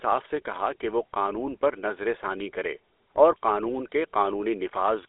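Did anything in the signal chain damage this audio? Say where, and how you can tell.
Yes. The damage happens at the codec stage and lasts through the whole speech clip. It has the buzzy, gravelly roughness of the GSM full-rate codec, and the roughness is plainly audible. The band runs from about 300 Hz to 3.5 kHz, with nothing above 3.8 kHz. The codec rebuilds the voice from a vocal-tract model driven by coarse, regularly spaced pulses, which fits a 13 kbps stream.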